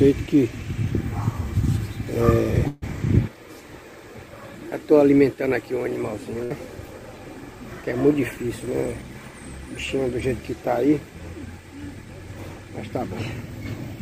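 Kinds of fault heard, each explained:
Call audio freeze: From 2.67 to 2.84 s the last sound is stretched and fades for about 146 ms. It then resumes where it stopped, likely because delayed packets emptied the jitter buffer.
Burst of packet loss: At 6.44 s about 60 ms is filled by the fading, held last sound. The audio then jumps ahead, with about 60 ms lost.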